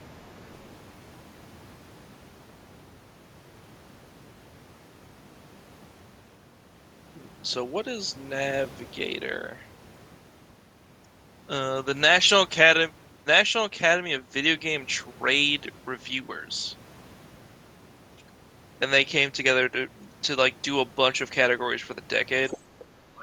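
A speech recording with three related echo-canceller problems, almost all bunched into its last second. The first is the other side's voice leaking through: at 0.54 to 0.68 s a very faint second voice sits far beneath the talker, and it returns from 22.49 to 22.58 s, much louder though still below the main voice, and again briefly at 22.80 to 22.84 s at a faint level. These scraps are most likely far-end sound from a loudspeaker that the canceller failed to subtract from the microphone. What separates them from ordinary room reverberation is that they are a different voice rather than a smeared tail of the talker's own. Right after the louder leak, from 22.58 to 22.69 s, the background is gated by the echo canceller. The room tone dips by about 8 dB for roughly a tenth of a second and then comes back. It is a pumping of the ambience, not a hole in the talker's speech, and that distinguishes it from packet loss or a dropout in the signal itself. 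Finally, from 22.97 s to the end, the speech is suppressed in double talk. The talker's own voice is pushed down very deeply, in a way that sounds like it is being cut out, for roughly a third of a second, likely because both sides spoke at once and the canceller treated the near voice as echo. Unlike the gating, this attacks the speech itself, and it coincides with the far side's activity rather than following a pause.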